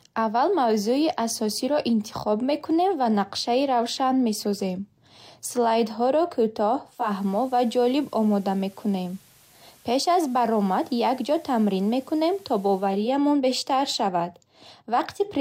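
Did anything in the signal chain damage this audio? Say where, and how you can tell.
Yes, and it happens at the reception end, before anything was recorded. From 6.85 s to 13.16 s this is a digital radio blending to analogue: the receiver lost the digital stream and cross-faded over about 378 ms to the station's FM broadcast, then faded back just before "бештар шавад". On the FM side there's a hiss floor roughly 30 dB under the speech. The level doesn't shift at either blend.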